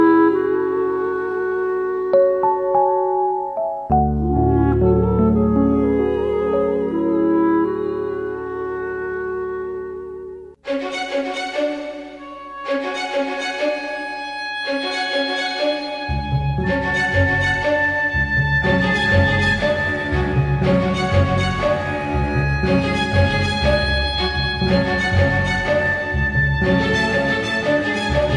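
No technical faults can be heard anywhere in the clip.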